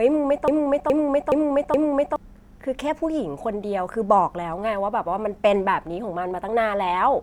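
Just under half a second in, at 0.48 s, the speech falls into a broken-record loop: the same 420 ms fragment plays four times back to back, identical each pass, until it lets go at 2.16 s. Most likely the player, encoder or stream stalled and kept re-sending the last chunk it had buffered, so whatever should have been heard in that stretch is simply gone.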